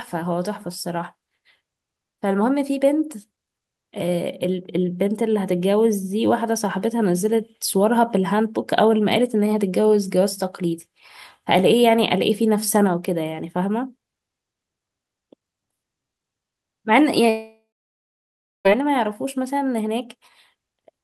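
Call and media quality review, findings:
Long network dropout, 17.29–18.67 s: last sound smeared into a fading buzz, then about 1 s of silence; 1.36 s never played. Likely network packet loss outlasting concealment.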